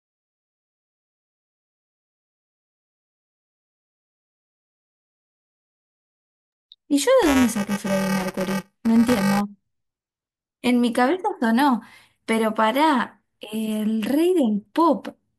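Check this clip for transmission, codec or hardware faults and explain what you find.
One fault is present, buffer tearing, from 7.22 to 9.41 s. Here the software filling the ring buffer and the hardware draining it have drifted out of step, so they cross partway through each period. Roughly a tenth of every buffer replays audio from about 10 ms earlier, spliced in with hard edges. Those repeating seams produce a steady robotic buzz near 345 Hz, which fits a 128-sample buffer, heard over the speech throughout that stretch.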